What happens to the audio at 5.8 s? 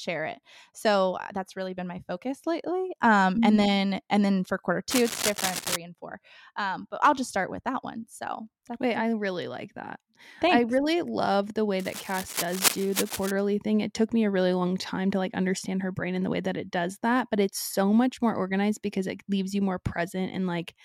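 Cable scratch noise runs from 4.90 s to 5.76 s, so at 5.8 s the speech has just come clear of it, right as "and four" begins. Straight after "and then for quarter", dense, uneven bursts of scratching and rustling sit over the speech, only a little quieter than the speech itself. The likely cause is a worn cable, connector or control being moved, which makes its contact resistance flicker rapidly and injects that ragged noise into the signal.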